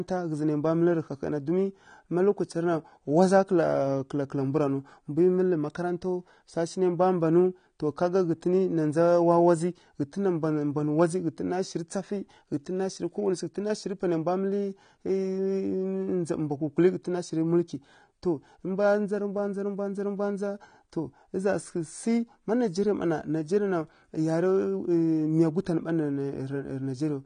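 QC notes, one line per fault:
throughout, AAC compression: nothing above 9.7 kHz and plainly audible coding damage, unlike a clean low-pass filter, which fits AAC-LC near 32 kbps as the likely cause.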